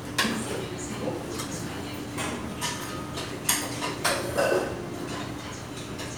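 Listening to this recording of sounds, nothing stood out as a technical problem.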